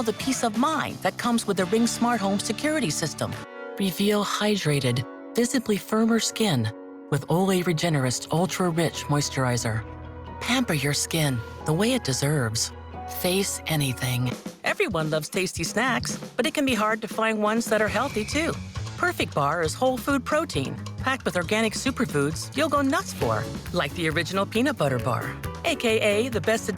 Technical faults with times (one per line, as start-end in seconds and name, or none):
none